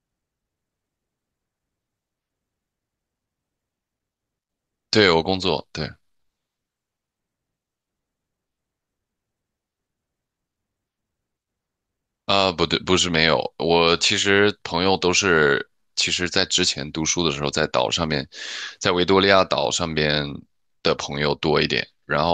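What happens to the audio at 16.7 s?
Nothing goes wrong at 16.7 s; the speech continues intact through that moment with no dropout, click or distortion.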